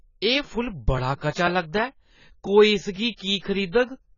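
From the start the speech sounds dull and smeared, with nothing above about 7.1 kHz and a warbling, fizzy texture on sustained sounds and sibilants. This is heavy AAC compression damage, likely from AAC-LC at a very low bitrate, consistent with roughly 16 kbps. At that rate the encoder lowers its cut-off and quantises the remaining frequency lines coarsely against its hearing model, leaving spectral holes or substituting noise in some bands.

From 0.48 s to 3.96 s there is a steady series of ticks, about seven in all, spaced every 0.50 s and audible only while speech is present. These are periodic USB or driver dropouts. At that fixed interval, something blocked the audio path and roughly 2 ms of audio was skipped outright rather than replaced by silence. Each skip leaves a sudden jump in the waveform, heard as a click.

From 1.16 s to 1.21 s, a short hiss runs for about 52 ms ahead of a sharp attack, and the attack itself sounds softened and smeared. 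This is pre-echo. The codec spread the quantisation noise meant for the loud onset across its whole transform block, so the quiet moment before the attack carries noise sized for the louder sound that follows.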